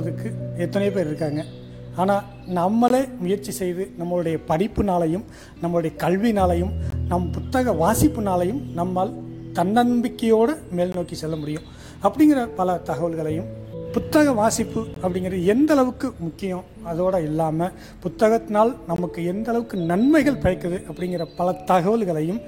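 Silent gaps between chunks appear at 2.88–2.90, 6.90–6.92, 10.92–10.94, 14.94–14.96 and 18.96–18.98 s. Each is a 20 ms hole, repeating every 4 s at each chunk join. Unlike a dropout, no sound is lost: playback resumes exactly where it stopped.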